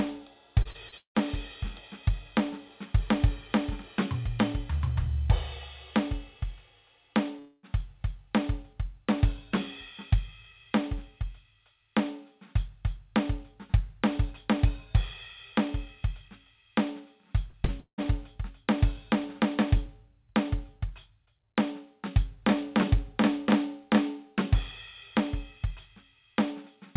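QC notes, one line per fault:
0.62–1.39 s, repeated packet loss (robotic sound): five gaps, longest 170 ms, patched by repeating prior music, leaving about a third concealed and a choppy texture.
7.39–7.66 s, long network dropout: roughly a quarter-second of music replaced by a fading smeared continuation with no silence, likely from audio that never arrived.
17.50–18.07 s, repeated packet loss (robotic sound): four gaps, longest 178 ms, filled by stretching earlier sound over 42% of the span, giving a stuttering quality.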